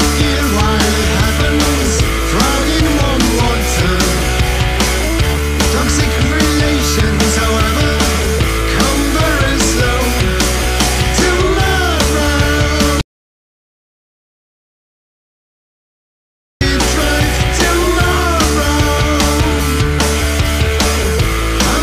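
Audio dropout to silence from 13.01 to 16.61 s: the sound cuts out for 3.6 s with no room tone, likely because the input was lost while recording continued.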